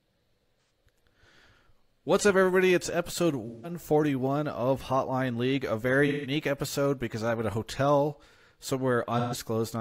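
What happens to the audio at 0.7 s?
A brief smeared, noisy patch at 0.68 s comes from AAC frame loss with concealment: the decoder covered the missing frames by reusing the last good spectrum.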